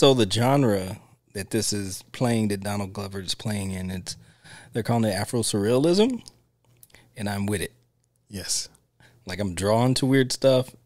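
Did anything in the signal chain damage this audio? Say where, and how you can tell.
No, nothing in the chain audibly damaged this speech; at no stage, from capture through playback, can any point be heard where the signal breaks down.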